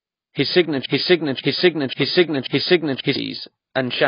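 Broken-record loop, 0.86 to 3.16 s: a 0.54 s fragment of speech repeats four times back to back, likely because a stalled stream kept resending its last piece, so the audio due then is lost. AAC compression runs throughout: nothing above 5 kHz and heavy codec damage leave the voice dull, smeared and warbly, likely from AAC-LC at a bitrate that fits about 16 kbps.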